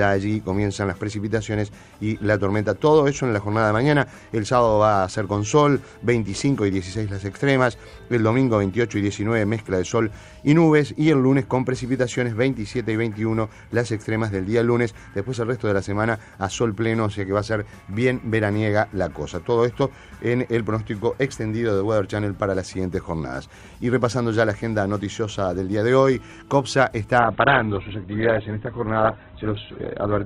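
At 27.19 s the adaptive stream drops to a lower bitrate until 30.26 s. Treble vanishes above 4.2 kHz, sounding dull and coarse. It fits Opus falling from 64 to 8 kbit/s.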